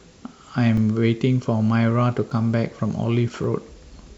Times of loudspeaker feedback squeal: none

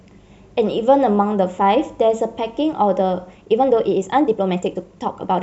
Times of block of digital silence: none

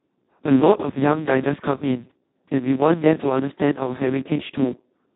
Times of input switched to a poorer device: none

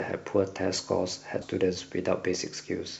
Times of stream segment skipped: 1.41-1.46

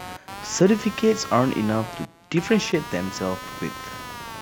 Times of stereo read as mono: none

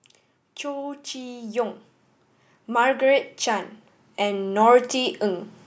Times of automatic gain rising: 0.61-1.81, 2.53-5.50

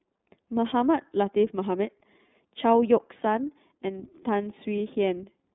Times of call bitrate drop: none

